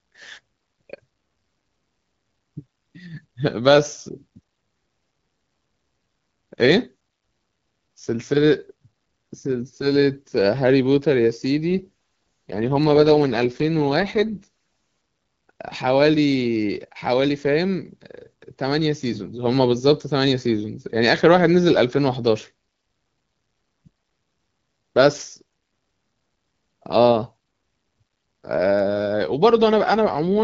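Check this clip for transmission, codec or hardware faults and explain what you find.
Two stretches of AMR rate drop are audible, from 11.70 to 14.47 s and from 29.96 s to the end of the clip, against a wideband AMR-WB base sound that fits a 12.65 kbit/s mode. In both stretches the link appears to fall to a roughly 6.6 kbit/s mode, spending fewer bits on the speech. The speech turns raspy and synthetic. The spectrogram keeps its full band, with no gap in the waveform, but the harmonics blur.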